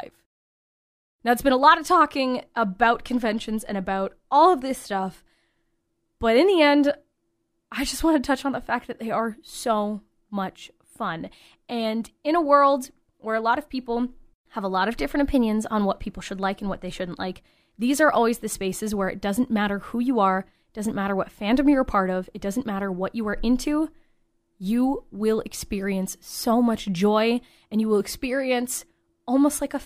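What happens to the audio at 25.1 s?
Nothing goes wrong at 25.1 s; the speech carries on intact through that moment with no dropout, click or distortion.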